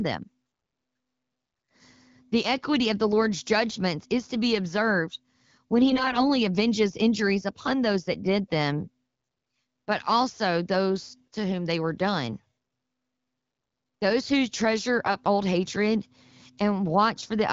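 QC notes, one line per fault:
5.90–6.26 s and 15.06–15.14 s, AMR bit errors: the voice turns hoarse and gargly while keeping its pitch and loudness, with no gap or muting as in frame loss. Flipped, weakly protected bits misplace excitation pulses and skew fine gain and spectral values, heavier in the longer first burst.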